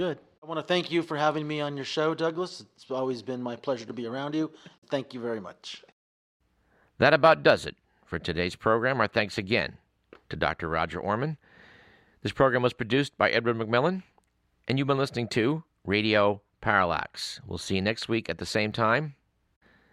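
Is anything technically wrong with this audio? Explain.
Yes. There are two blocks of digital silence in this speech, at 3.89 s (about 6 ms) and 18.72 s (about 5 ms). Each time, the sound cuts out and back with no fade. The output probably wasn't filled in time. Being so short, each one comes across as a quick tick rather than a hole.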